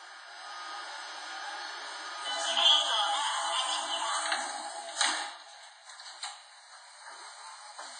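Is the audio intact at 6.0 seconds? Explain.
No. At 6.0 seconds, as throughout the clip, the sound carries heavy damage from what is likely WMA compression. Long transform blocks smear quantisation noise, giving a ringing, washy hiss that breathes with the signal. Nothing remains above 10.6 kHz, which fits a bitrate near 24 kbps.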